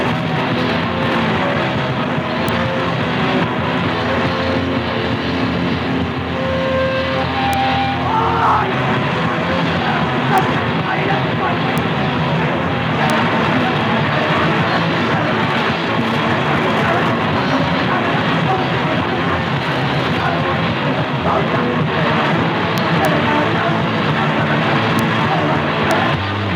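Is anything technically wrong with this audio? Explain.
Yes. Integer overflow at 2.49, 7.53, 10.38, 11.78, 13.10, 22.78 to 23.05, 24.99 and 25.91 s: loud peaks exceed the integer limit and wrap to the opposite sign, producing violent cracks far sharper than clipping.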